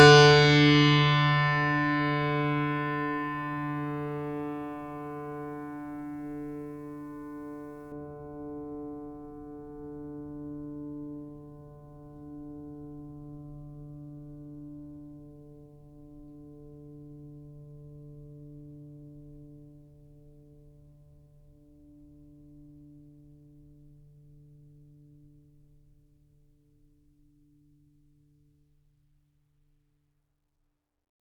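Music, with pre-emphasis left on from 0.0 to 7.92 s: the treble boost applied before recording or transmission was never undone, leaving 10 kHz about 11 dB above 1 kHz, consistent with an uncorrected J.17 curve. That opening section sounds thin, bright and sibilant.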